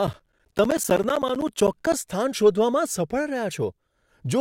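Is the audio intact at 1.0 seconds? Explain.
No. From 0.07 to 1.93 s the speech ticks every 64 ms. These are periodic USB or driver dropouts, each replacing roughly 10 ms of audio with silence.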